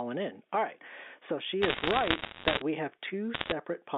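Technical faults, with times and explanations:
Throughout, gain pumping: the level swings by around 10 dB, pulled down on each loud sound. This likely comes from gain set too high feeding a fast limiter or compressor. It differs from steady compression because the level visibly breathes in time with the loud parts.
1.62 to 2.62 s, bit errors on a digital phone line: a stretch of crackle ending just before "we have", made of sharp single-sample ticks. They come from flipped bits on the telephone line, around 1.5 percent of them, each altering one sample. A hit on a high bit or on the sign of a loud sample gives the loudest ticks. The speech underneath stays intact, which separates this from dropouts or codec breakup. The coding itself sits in a roughly 250 to 3600 Hz telephone band.
3.34 to 3.52 s, bit errors on a digital phone line: a shorter burst of the same tick-like crackle just after "we have", again at around 1.5 percent. 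Individual samples are corrupted while the speech continues unbroken, rather than being muted or smeared.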